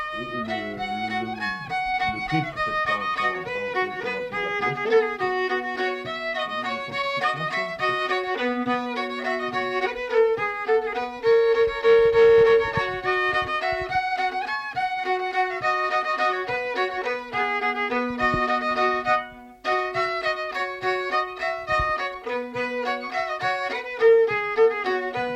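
Nothing stood out as a technical problem on listening.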